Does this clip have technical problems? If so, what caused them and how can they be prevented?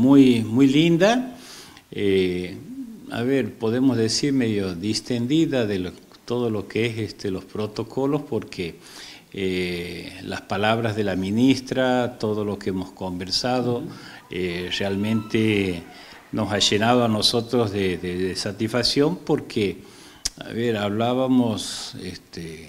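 No, nothing in this clip points to a technical fault, so there is no cause to trace and nothing to prevent.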